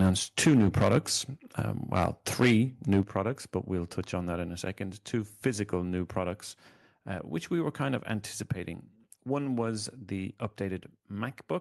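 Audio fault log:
0.4–0.98 s, 1.96–2.06 s, 2.41–2.57 s, 2.91–3.01 s, microphone overload: the loudest moments of the speech take on a crackling, flattened edge because the peaks ran past the converter's limit, by about 8, 6, 8 and 5 dB in turn, and their tops were sliced off, roughly a tenth or less of the samples in each stretch. The likely cause is an input volume set too high. Unlike a gain change, this distorts only the peaks and leaves the overall level where it was.
0.47 s and 3.03 s, microphone volume stepped down: the speech and the background both drop suddenly, by about 3 dB and then about 8 dB, and stay lower, the second drop just before "products but we'll touch". Each comes during or right after an overloaded stretch, so the likely cause is the call software cutting the device's input volume in a single step. Unlike overload, this adds no distortion, only an abrupt and lasting fall in loudness.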